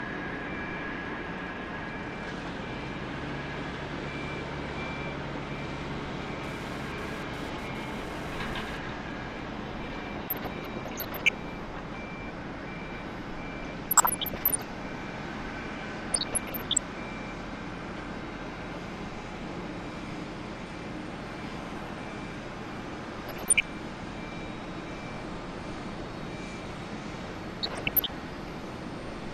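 GSM phone buzz runs from 6.44 to 8.78 s. A nearby 2G phone moving data sends radio bursts about 217 times a second, which the audio circuitry rectifies into a hard, harmonic-rich 217 Hz rasp, about 9 dB below the sound, coming and going with the transfer.

DAB burbling follows at 10.28–11.29, 13.63–14.62, 16.12–16.78, 23.22–23.65 and 27.63–28.10 s. Weak reception lets bit errors, roughly half a percent to one and a half percent, slip past error correction into the MP2 data, so wrong samples put short noise blips into single sub-bands, and any wrong scale factors that get through make sub-bands jump in level for up to a frame, giving short blips of noise.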